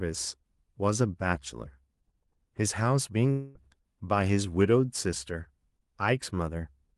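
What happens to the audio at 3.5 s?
A long network dropout, 3.31 to 3.58 s: speech turns into a fading buzz, likely the receiver extending the last sound, losing about 0.24 s.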